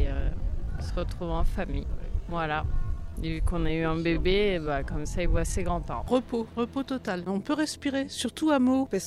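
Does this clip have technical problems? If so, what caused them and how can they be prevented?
Yes. A time-stretched section runs from 0.0 to 5.84 s at 0.725 speed with pitch unchanged. It drags, likely from software repeating short fragments to lengthen the audio. A spectrogram shows blurred onsets and stretched events at steady frequencies, and the pace jumps abruptly at 5.84 s. To prevent it, fit the audio to its length by editing rather than stretching.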